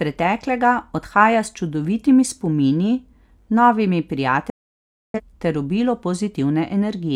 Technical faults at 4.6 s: digital broadcast dropout

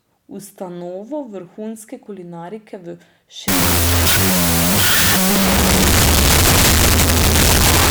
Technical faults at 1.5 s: none

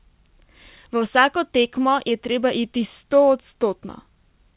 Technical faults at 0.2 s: none

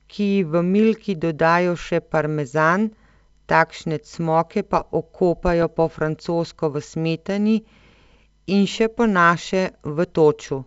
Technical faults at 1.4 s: none

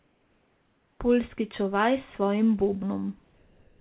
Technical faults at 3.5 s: comfort noise in place of the background

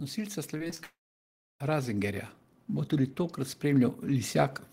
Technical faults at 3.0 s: DC offset

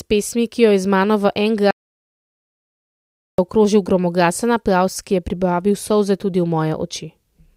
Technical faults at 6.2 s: none

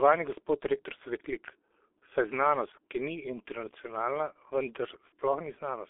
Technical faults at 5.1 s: G.723.1 codec; VoIP packet loss concealed by the speech codec

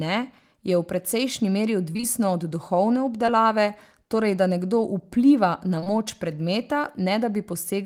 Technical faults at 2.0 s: short concealed packet loss

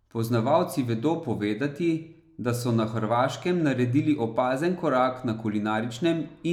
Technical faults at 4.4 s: none

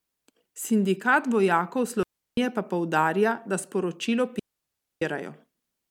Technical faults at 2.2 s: digital wireless dropout

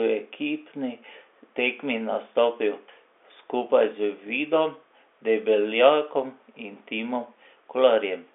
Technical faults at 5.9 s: none

